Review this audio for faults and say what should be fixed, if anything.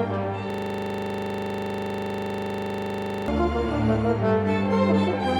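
From 0.50 to 3.28 s there's a system hang loop: the host froze while the hardware kept replaying one 40 ms buffer, giving a rattling 25 Hz buzz. Fix the driver or system stall, and add a watchdog that mutes output when the buffer stops updating.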